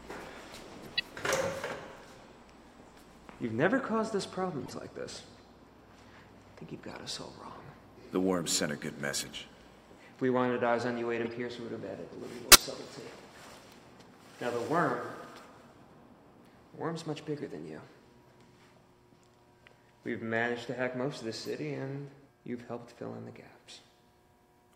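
Brief chirps and noise bursts break through at 0.83–1.02, 4.63–4.71, 6.90–6.92, 9.19–9.32, 11.24–11.32, 12.49–12.62 (loudest), 17.37–17.39 and 21.44–21.47 s. Each is a corrupt frame decoded: damaged compressed data was played anyway, throwing energy into wrong frequencies for a few frames.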